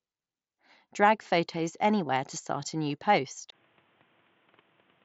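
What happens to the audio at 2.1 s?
At 2.07 s, just before "to start a new", concealed Bluetooth headset packet loss fills a 15 ms gap with repeated preceding waveform: a brief buzzy tone, not a silent dropout.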